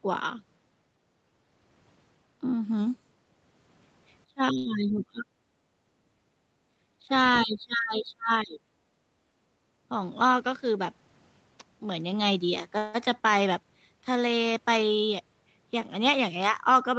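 Right from 4.26 to 5.26 s the speech drops away by up to about 30 dB over roughly three-quarters of a second, and again briefly at 7.01 to 7.10 s (about 15 dB) and then hard from 7.44 to 8.63 s. That's speech suppressed in double talk, most likely the echo canceller mistaking this talker for loudspeaker echo while the far side spoke and pulling everything down.

Tucked inside that first dip, at 4.57 to 4.67 s, there's a short stall from a late packet. The jitter buffer ran dry, so the receiver held the last sound for 78 ms until the packet turned up and then carried on. Nothing is lost, but that sound hangs a touch too long.

From 5.54 to 6.41 s the room tone sinks by about 10 dB. That's background gated by the echo canceller: while the loudspeaker played, it clamped the mic down, and the ambience comes back once it lets go.

At 9.56 to 10.74 s there's a jitter buffer speed-up. The receiver had banked more audio than it wanted and trimmed around a tenth of a second in tiny pitch-period slices. 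The talker sounds about 7% faster at the same pitch, a little rushed.

At 12.78 to 12.96 s there's a call audio freeze. Packets were likely held up in transit, so the last sound gets stretched into a 165 ms fill before the speech resumes where it left off. That inserts a gap rather than dropping anything.

Another jitter buffer speed-up runs from 15.34 to 16.83 s, gentler at about 4% fast, shaving roughly 70 ms. The content above 8 kHz is simply absent throughout, which is just the call path's normal band limit.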